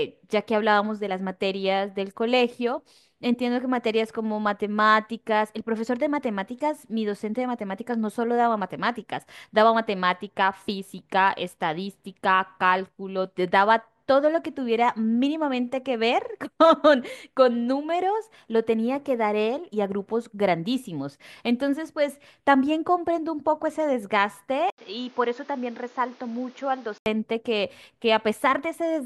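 At 24.70 s the speech drops out for 80 ms, then returns duller, quieter, and cut above 7.1 kHz, with new background noise. Likely an input switched to a poorer device, until 27.06 s.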